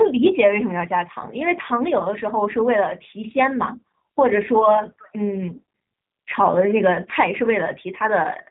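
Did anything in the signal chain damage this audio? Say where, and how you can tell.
Yes. At the codec stage, the whole clip shows G.729 codec damage that is plainly audible. The speech is intelligible but rough and slightly synthetic, which fits an 8 kbit/s G.729A stream rebuilding each 10 ms frame from a vocal tract filter, a pitch predictor and a handful of pulses. On a spectrogram, nothing appears above 4 kHz, and harmonics look smeared and grainy rather than cleanly striated.

At the network stage, VoIP packet loss concealed by the speech codec affects about 1.99 to 2.03 s, which points to a single lost 10 ms frame. The decoder filled the gap by extrapolating from its last pitch and filter with falling gain, so the sound is briefly stretched and fades. Because the next frames depend on that guess, the disturbance runs for about 30 ms. On a waveform, this shows as a short stretch of dipping amplitude.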